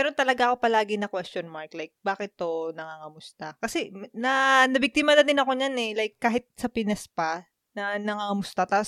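No technical faults are audible at any point in the recording.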